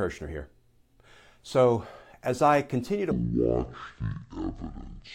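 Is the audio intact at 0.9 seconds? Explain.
Yes, at 0.9 s the speech plays through cleanly with no dropout, click, distortion or other fault.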